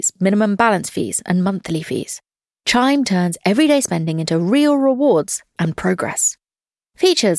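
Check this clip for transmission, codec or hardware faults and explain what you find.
No transmission, codec or hardware faults are audible anywhere in the clip.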